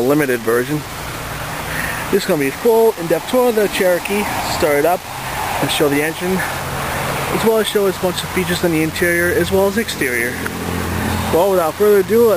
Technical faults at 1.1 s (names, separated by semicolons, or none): low bit depth without dither